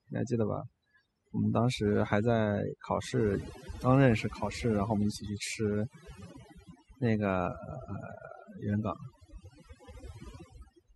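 Speech over a background that drops and breaks up, scattered with twinkling specks. This is overdone noise removal: a noise reducer set too aggressively cuts individual frequency bands that resemble noise, taking quieter parts of the voice along with the noise.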